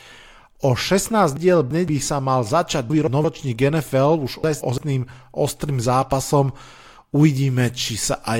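At 1.37 to 1.88 s, just before "sa mal začať", chunks play out of order: a 171 ms block lands two blocks late. The same happens one block late at 2.90 to 3.24 s, after "sa mal začať", and at 4.44 to 4.78 s, before "ostrým zápasom". Each produces a jumbled stretch with three hard joins.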